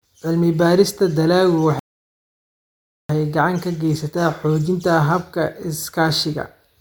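At 1.79 s the speech drops into dead silence for 1.3 s, then picks up at 3.09 s exactly where it left off, with nothing skipped. That is a rebuffering stall: playback exhausted its downloaded audio and waited for more, adding time without losing any.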